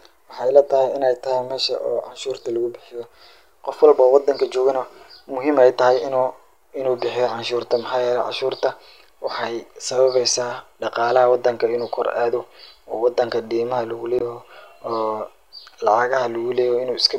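At 14.17 to 14.22 s, right after "wadanka deemaha lugu", damaged data in a compressed stream produces a brief glitch of about 44 ms as the decoder misreads corrupt frames and resyncs.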